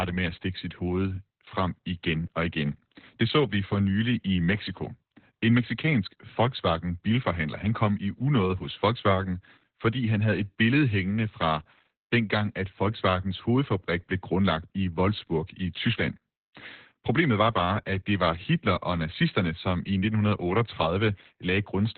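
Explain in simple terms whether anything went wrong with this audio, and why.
The speech sounds muffled, boxy and a little hoarse from start to end, with a faintly robotic edge. There is nothing above about 4.3 kHz, so the crisp top end is gone. This is heavy Opus voice compression. To save space, the coder kept only a narrow band of low frequencies and rebuilt the rest of the speech coarsely from a simplified model of the voice, which causes that rough, muffled quality.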